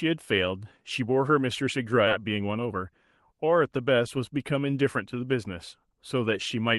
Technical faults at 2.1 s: skip ahead

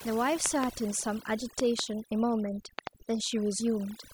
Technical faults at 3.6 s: overdone noise removal

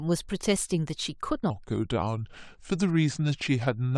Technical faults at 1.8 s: section at the wrong speed

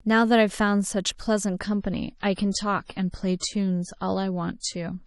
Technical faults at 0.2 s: none

